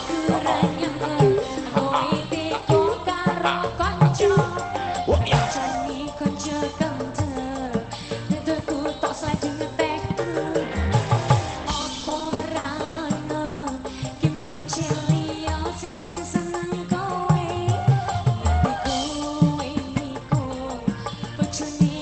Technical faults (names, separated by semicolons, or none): repeated stalls (stutter); call audio freeze; jitter buffer slow-down; jitter buffer speed-up